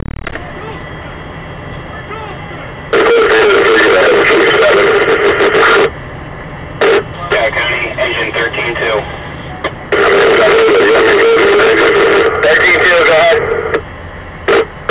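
Nothing in the audio stood out as a technical problem on listening.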